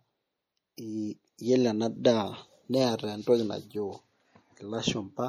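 Throughout the 5-second speech clip there is plainly audible damage of the kind MP3 compression leaves, and a low-bitrate MP3 encode is the likely cause; the sound fits a rate near 48 kbps. With so few bits, the encoder discards weak frequency lines, which flicker in and out between frames and give sibilants a watery, swirling edge. On a spectrogram the upper bands look patchy and speckled, with content ending at about 20.4 kHz.

At 0.77 s a pre-echo appears, spreading about 14 ms ahead of a sharp attack. The codec spread its quantisation noise across the whole transform block, so noise meant to hide under the loud onset also fills the quiet moment before it. It is heard as a brief hiss just before the attack, which then sounds softened. In the waveform, low-level fuzz creeps up before the transient, and on a spectrogram a faint broadband smear leads it.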